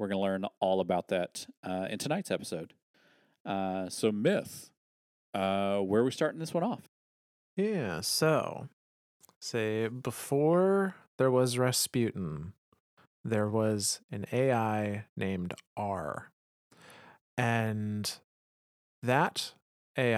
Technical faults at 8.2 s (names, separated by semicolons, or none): drift correction step